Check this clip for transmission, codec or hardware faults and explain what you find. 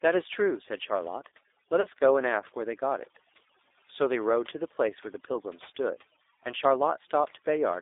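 Three faults are present: two run through the whole speech clip and one is a brief dropout.

Overdone noise removal is audible throughout. A suppressor pushed too hard has cut individual frequency bands whenever they sank toward its noise estimate, so pauses fall to near silence with twinkling specks. Unlike codec roughness, the artefacts flicker with the background level rather than following the voice.

A G.729 codec also shapes the entire clip. The sound is confined to roughly 300 Hz to 3.7 kHz, and the rough, slightly synthetic texture, plainly audible here, fits 8 kbit/s G.729A rebuilding speech from a vocal tract filter, a pitch predictor and sparse pulses. Plain band-limiting would muffle the sound without this buzzy, pulse-built graininess.

VoIP packet loss concealed by the speech codec occurs from 1.81 to 1.87 s. About 30 ms of audio is missing, which fits a single lost packet. 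The decoder stretched its last pitch and filter state into a fading sound, and the voice stays weak briefly afterward. A plain dropout would cut straight to silence instead.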